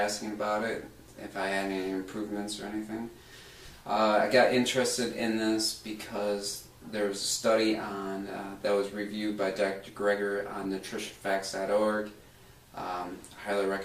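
From 9.62 to 11.71 s a call bitrate drop makes the sound coarse and dulled, consistent with the encoder falling from about 64 to 22 kbps for roughly two seconds. A spectrogram shows the upper band thinning and cutting off lower, then returning.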